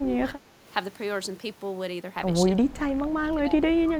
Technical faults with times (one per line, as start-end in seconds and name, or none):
0.00-0.66 speech suppressed in double talk
2.46-3.97 speech suppressed in double talk